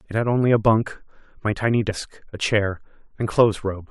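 At 1.89 to 1.92 s the speech is broken by a brief fault lasting about 22 ms, caused by damaged data in a compressed stream. A stretch of the encoded stream is corrupt, so the decoder misreads those frames, loses sync and hunts for the next valid frame header.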